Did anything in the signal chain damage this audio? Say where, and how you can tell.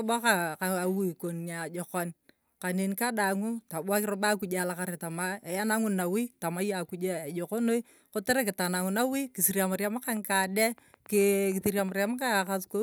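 Yes. A train of clicks runs from 10.08 to 12.48 s, starting just after "kisiriam riam" and lasting to near the end of the clip. About fifteen sharp, similar-shaped pops arrive at roughly 6.3 per second with uneven spacing, peaking at about the level of the speech and audible in the gaps as well. Same-shaped pulses added on top of the signal, not edits to it, point to something outside the audio content. The likely cause is interference picked up in the analogue wiring or a faulty connection or power supply.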